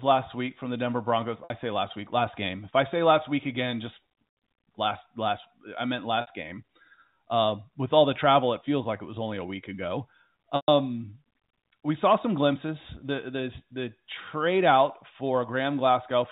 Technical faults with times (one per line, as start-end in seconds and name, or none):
1.44-1.50 packet loss with pitch repetition
6.21-6.27 packet loss with pitch repetition
10.56-10.68 packet loss with pitch repetition